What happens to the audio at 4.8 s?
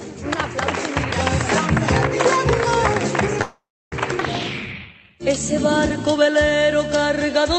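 A jitter buffer slow-down runs from 4.63 to 5.29 s. The receiver repeats pitch periods to rebuild its reserve, stretching the audio to 86% speed, about 0.1 s longer, at unchanged pitch.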